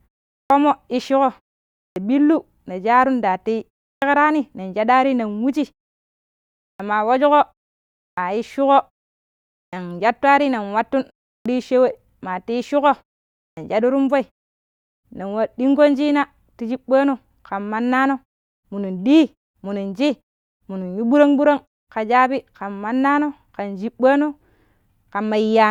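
The output device drops into a low-power state during silences and needs about 55 to 63 ms to wake and lock again. Each time speech resumes, its opening is lost, a clipped start after a pause. This happens at 0.44, 1.9, 3.96, 6.74, 8.11, 9.67, 11.4 and 13.51 s, after gaps of 0.34 to 1.09 s. Words burst out of silence missing their first sounds, while the muted pauses between them go quiet as expected.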